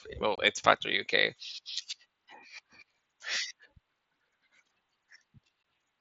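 At 0.36 to 0.38 s the speech drops out for about 22 ms, and again at 5.63 s for about 15 ms. These are unconcealed Bluetooth headset packet loss: voice packets between the headset and phone never arrived, and silence filled their place. The lengths fit runs of a few 7.5 ms mSBC frames. Each hole has hard edges. On a waveform it shows as a flat gap with sheer sides, and on a spectrogram as a thin, full-height vertical blank across the 8 kHz wideband range.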